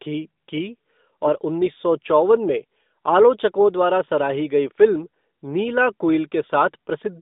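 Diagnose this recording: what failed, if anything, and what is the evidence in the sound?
Nothing failed: the speech sits in the 200 Hz to 3.7 kHz band of an AMR narrowband mobile codec, with the light coding texture that fits its 12.2 kbps mode, and no stage from capture to playback shows a fault.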